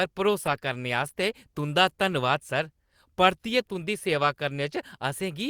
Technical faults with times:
0.45-0.55 lost packet rebuilt from error correction
4.21-4.23 lost packet rebuilt from error correction

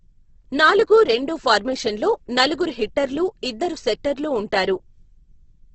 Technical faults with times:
0.00-5.74 Opus compression

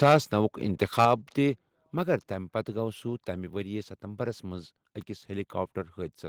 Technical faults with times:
0.98-1.05 microphone overload
1.05 microphone volume stepped down

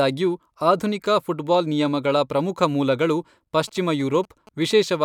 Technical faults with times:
3.68-4.96 GSM signalling bursts

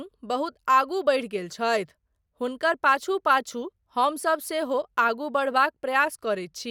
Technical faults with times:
none

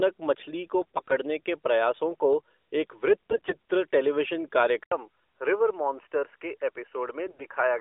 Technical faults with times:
0.81-1.15 AMR bit errors
3.30-3.55 AMR bit errors
4.83-7.80 input switched to a poorer device
7.27-7.44 AMR bit errors

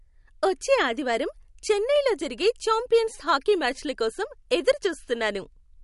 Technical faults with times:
0.00-5.83 MP3 compression

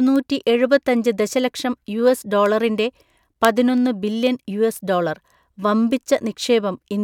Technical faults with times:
0.16-6.74 word clock ticks

